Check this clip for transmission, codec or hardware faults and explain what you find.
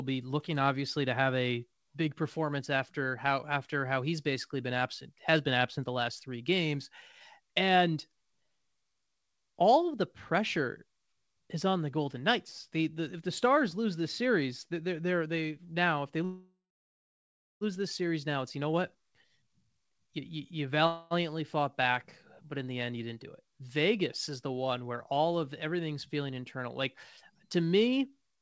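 Yes, there are two kinds of fault here, each heard twice. The audio comes through a call path where nothing reaches above 8 kHz, which fits a G.722 wideband call codec.

Call audio freeze: At 16.25 to 17.64 s, right after "they now if they", the sound stretches into a fading buzz and then about 1.05 s of silence before resuming with "this series". Nothing is lost; about 1.36 s of delay is added. A second, shorter freeze runs from 20.87 to 21.14 s, about 0.24 s with no silent stretch, just before "fought back but in". The likely cause is delayed packets draining the jitter buffer, so the receiver stretched out the last sound while it waited.

Jitter buffer speed-up: From 18.28 to 20.86 s, the speech runs at about 119% speed with the pitch unchanged, so it sounds hurried. Roughly half a second is trimmed. It happens again at 28.29 to 28.42 s, after "to me", at about 170% speed, with around a tenth of a second removed. 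In both cases the receiver is cutting out pitch-period-sized pieces in a row to reduce the delay.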